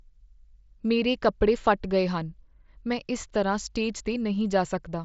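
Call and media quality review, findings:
No faults found in this speech clip. The Bluetooth mSBC headset codec path is audible as a band limit near 7.7 kHz with light codec graininess, which fits mSBC at about 61 kbps.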